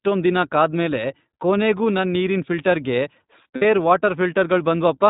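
Throughout, the speech passes through the iLBC codec, which fits its 15.2 kbps mode with 20 ms frames. Each frame's excitation is coded independently and nothing above 4 kHz survives, so the voice sounds muffled and plainly rough and synthetic.

From 3.56 to 3.63 s, lost iLBC frames (a 60 ms gap consistent with three 20 ms frames) force the decoder to repeat the last pitch cycle mixed with noise. The gap sounds like a held, slightly buzzy vowel, and the voice recovers immediately afterward.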